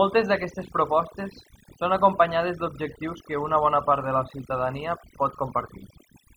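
From start to finish the speech carries overdone noise removal. The noise reduction was pushed too hard, so individual frequency bands are cut deeply or gated off whenever their level sits near the estimated noise floor. Low-level parts of the voice fall under that threshold and are removed along with the noise. Between phrases the background drops to near silence broken by twinkling specks.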